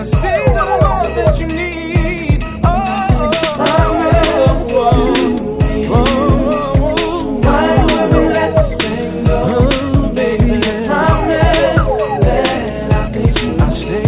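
No technical faults are audible.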